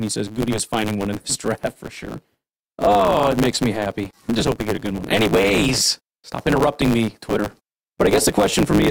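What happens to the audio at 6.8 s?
At 6.8 s the speech is affected by a block size mismatch (truncated), which runs through the entire clip rather than starting at that point. One stage hands over blocks longer than the next stage takes in, which fits 512-sample writes, and the tail of each block is discarded. The regular cuts produce a buzz at 109 Hz, and the speech runs about 1.16 times fast while keeping its timbre.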